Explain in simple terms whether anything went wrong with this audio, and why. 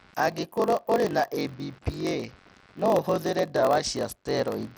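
Yes, a few things went wrong, and all three run through the whole clip of speech.

First, there's computer activity noise: a faint buzzy chatter pulsing roughly a hundred times a second, sitting well below the voice. It tracks the computer's workload, not the speech, because processor or graphics load is nudging the audio circuit's shared ground.

Second, the speech has a gritty, smeared quality, with the top end dull and unstable. That damage is plainly audible and most likely comes from Bluetooth SBC compression, a basic codec that gives the high frequencies too few bits and roughly rounds off the rest.

Third, there's a low buzz at about 46.9 Hz and the speech runs slow, at about 0.938 times normal speed but near its usual pitch. That's a block size mismatch (padded): one stage hands over short blocks, the next reads full ones and fills the gap with silence. It fits a 1024-sample read size.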